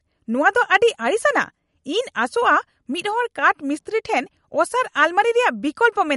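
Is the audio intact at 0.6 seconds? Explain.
No. At 0.6 seconds the speech carries damage that runs through the whole clip, likely from MP3 compression. Nothing is left above 11.2 kHz, so the treble is cut flat. That fits a low bitrate near 49 kbps. With so few bits, the encoder drops weak frequency lines and lets them flicker between frames. The result is plainly audible. The sound turns watery and swirly, s sounds chirp metallically, and attacks smear.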